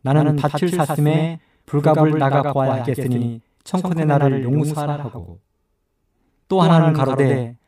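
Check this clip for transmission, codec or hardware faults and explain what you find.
One fault runs through the whole clip: a doubled audio track. Throughout the speech, every syllable is followed by a second, slightly weaker copy arriving about a tenth of a second later and roughly 5 dB down. It sounds like a flat, slap-back stutter with no reverberant tail or room colouring. The cause is likely the same signal being mixed in twice, perhaps captured again through a slower path, so a full-band duplicate trails the original by a fixed offset.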